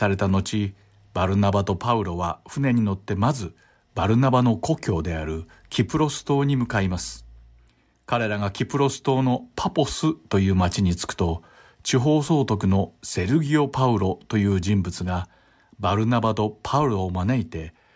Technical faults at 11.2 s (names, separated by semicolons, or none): none